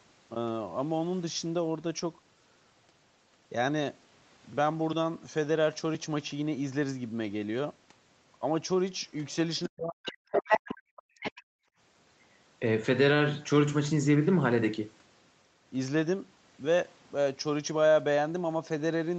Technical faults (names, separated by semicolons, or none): speech suppressed in double talk; other side's voice leaking through